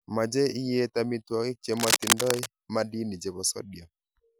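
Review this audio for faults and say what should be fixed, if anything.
Cable scratch noise runs from 1.73 to 2.48 s, a burst of dense, uneven scratching roughly as loud as the speech itself. The likely cause is a worn cable or connector being moved, its contact resistance jumping about and injecting noise. On a spectrogram it shows as ragged broadband smears across the whole frequency range; the waveform carries jagged, irregular spikes over the speech. Replace or reseat the cable and keep it still during recording.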